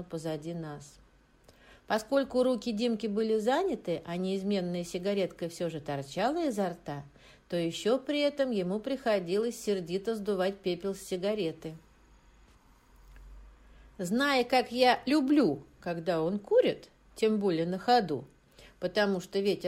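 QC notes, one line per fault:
Nothing to flag here: I listened all the way along and there's no fault to log.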